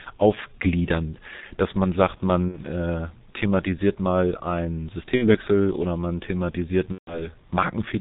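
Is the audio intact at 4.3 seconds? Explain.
No. At 4.3 s, as throughout the clip, the speech carries heavy G.723.1 codec damage, which fits a stream of about 6.3 kbit/s. The codec discards everything above 4 kHz and models the voice in coarse 30 ms frames, so the speech sounds muffled and hoarse, with smeared consonants.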